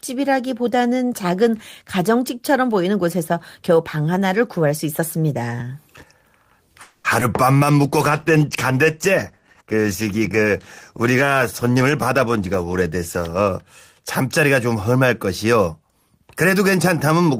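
From 6.81 to 7.06 s the sound stalls for 230 ms. The last sound carries on as a fading buzz rather than going silent. This is likely a call audio freeze, with packets held up until the jitter buffer ran dry. Nothing is lost, but the rest arrives 230 ms later.

At 7.20 to 7.23 s comes a short concealed packet loss. About 20 ms of audio never reached the decoder in time. The receiver stretched the previous sound over about 10 ms to cover the hole. It is heard as a brief smear or wobble.

From 7.84 to 13.6 s a call bitrate drop takes hold. The encoder falls from 32 kbps to 15 kbps and stays there for nearly six seconds. Coding becomes coarser and the top end is trimmed. The speech sounds rougher and duller until the rate recovers.

Inside that stretch, from 11.75 to 13.49 s, a jitter buffer speed-up runs. The buffer held too much audio, so the receiver cut many tiny pitch-period slices, about a fifth of a second in all. 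The speech plays at 113% speed, hurried but unchanged in pitch.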